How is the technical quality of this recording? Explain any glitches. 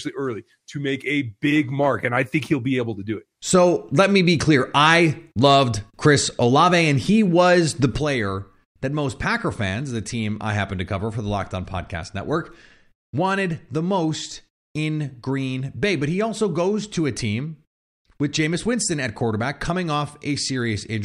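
The recording has one clear glitch. At 7.98 s a sudden gain jump drops the level by about 6 dB, and it stays there to the end. Speech and background noise fall together in a single step, with no ramp. That points to a gain setting or bit shift applied instantly, likely, rather than a fade or compressor action, which would glide.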